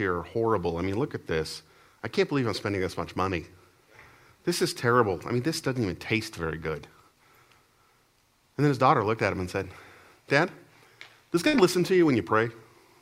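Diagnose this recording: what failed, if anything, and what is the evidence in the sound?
The network stage failed: a burst of packet loss at 11.47 to 11.55 s. For about 59 ms the receiver's concealment stretches the last received sound into a held tone or hiss that fades as it goes, and then the audio resumes with roughly 60 ms of material simply gone. On a spectrogram the concealed stretch shows as flat, smeared bands that darken toward the cut, followed by an abrupt change in content. The waveform shows a decaying envelope and then a jump.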